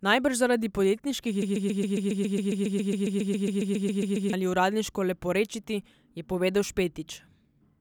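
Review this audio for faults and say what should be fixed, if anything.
Just after "zaradi podjetniških", from 1.42 to 4.33 s, a broken-record loop repeats one 137 ms fragment 21 times, likely from a stalled stream. Unlike echo, the repeats never decay, and the audio meant for that span is lost. Output silence on buffer underrun instead of replaying stale data.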